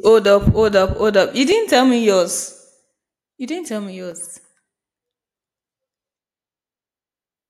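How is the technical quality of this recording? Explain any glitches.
Two brief glitches stand out, both dropped samples. The first lands at 1.52 s, just before "tell me", and the second at 4.12 s, right after "didn't tell me". Each is a single sharp click. The likely cause is a tiny run of missing samples, well under a millisecond's worth, so the waveform jumps abruptly to a later value. The gap removes no audible sound, but the discontinuity shows as a thin vertical line across the spectrum.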